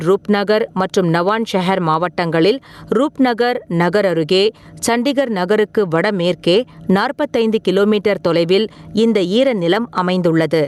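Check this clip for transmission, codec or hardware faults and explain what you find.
One fault runs through the whole speech clip: gain pumping. The gain swings by around 15 dB. The likely cause is input gain set far too high, with a fast limiter pulling it down on every peak. Loud and quiet parts sit close in level, and the speech sounds squashed. The call codec path, whose top end stops near 12 kHz, is working normally.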